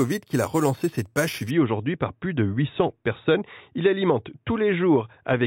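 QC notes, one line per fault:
0.00–1.51 s, imaging from sample-and-hold upsampling: a bright, metallic fizz sits above the speech, about 17 dB below it, until "aujourd'hui par plus de". Each sample was held rather than smoothed when the rate was raised. That leaves mirror copies of the spectrum, the lowest filling 4–8 kHz, which fits an 8 kHz original. Unlike steady hiss, the fizz rises and falls with the speech, and unlike harmonic distortion, its lowest copy moves opposite to the pitch.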